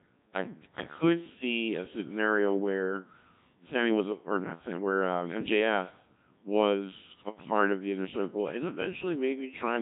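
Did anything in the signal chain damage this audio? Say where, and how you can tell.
Yes. The codec stage replaced the waveform with a Codec 2 vocoder, which sends only pitch, voicing, energy and a spectral envelope and then rebuilds the speech from sine waves. Throughout, the speech is robotic and buzzy, with nothing above 3.8 kHz, and the heavy damage fits a rate near 1.3 kbit/s.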